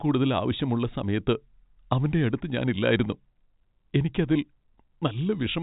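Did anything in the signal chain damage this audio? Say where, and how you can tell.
No, nothing in the chain has damaged this speech recording. It has passed through G.711 telephone coding, which can be heard in the band stopping at about 3.8 kHz and in at most a faint, level-following hiss from the logarithmic 8-bit coding.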